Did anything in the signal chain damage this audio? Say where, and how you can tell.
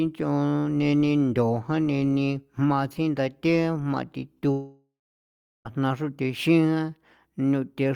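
Yes, a long network dropout, likely at the network stage. At 4.51 s the speech freezes into a fading buzz, then about 0.73 s of silence, and it resumes at 5.67 s with roughly 1.1 s missing. Packets stopped arriving, and concealment stretched the last sound until it gave up.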